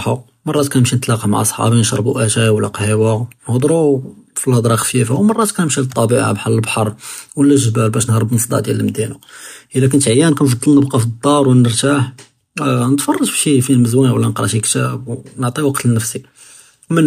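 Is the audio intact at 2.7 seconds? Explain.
Yes, at 2.7 seconds the speech plays through intact, with no audible fault at that moment.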